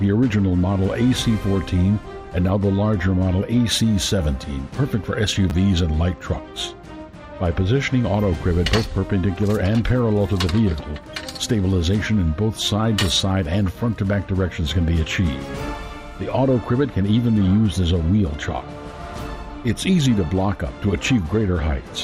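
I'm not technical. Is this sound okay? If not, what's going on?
No. There are two tiny glitches, heard as a quick click or brief buzz, once at about 5.5 s and again at 16.31 s. Both are a repeated buffer. The playback device ran short of fresh audio for a moment and replayed the last small chunk instead, twice at 5.5 s and once at 16.31 s. The chunks are very short, which fits a 10 ms buffer, so the repeat sounds like a click rather than a stutter.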